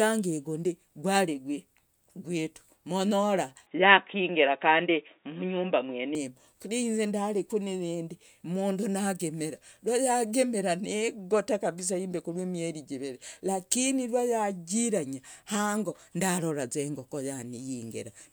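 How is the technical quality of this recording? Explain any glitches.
The recording has one clear glitch, a stretch where the speech abruptly loses its brightness.

From 3.67 s to 6.15 s, the input likely switched to a poorer device. That device passes nothing above 3.8 kHz, so the speech turns dull and boxy. Its level shifts by a few decibels, and a faint new background noise appears well below the voice. Both switches are instant, with no silence at either edge. A plain bandwidth drop or filter would narrow the sound without changing its level and background noise together.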